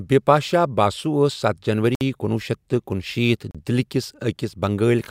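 A likely Bluetooth stall, with interference delaying packets until the buffer ran dry, cuts the speech to silence at 1.95 to 2.01 s (59 ms) and 3.51 to 3.55 s (36 ms) before it resumes.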